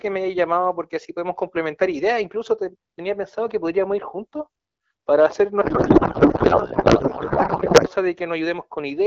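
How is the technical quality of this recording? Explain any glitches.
The recording has one clear fault, a codec payload misread. Outside it, the AMR wideband (HD Voice) speech sounds clean, which fits a rate of about 12.65 kbit/s.

From 5.61 to 7.89 s the speech becomes garbled noise and warble that barely follows it. Octet-aligned AMR frames are being parsed as bandwidth-efficient, so every field is shifted. Unlike packet loss, nothing drops out or mutes. Sound keeps flowing, just scrambled.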